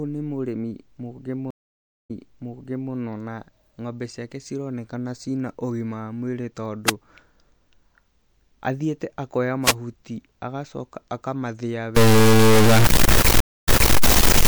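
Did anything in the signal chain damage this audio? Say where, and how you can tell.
Yes. The network stage broke twice with a stream reconnect. After "nĩ mũrĩmi mũgĩ", 1.51 to 2.93 s, the speech drops out for 0.59 s and resumes 0.84 s earlier before "na ng'ombe ciake cironekana". At 13.40 to 13.96 s a 0.27 s gap resumes 0.29 s back. The server resent buffered audio to a freshly started decoder.

The analogue radio link shows two wireless microphone noise hits: short bursts of static at 6.85 s, after "na ũgima wa mwĩrĩ", and at 9.62 s, after "athĩite akoya". Each lasts about 0.1 s. Multipath fading cancelled the FM signal briefly, letting receiver noise break through.

From 11.96 s to the end the speech is distorted, and the pauses fill with noise. That pattern points to a stuck bit, likely a broken data line or converter bit held at one value, offsetting about half the samples by a fixed amount.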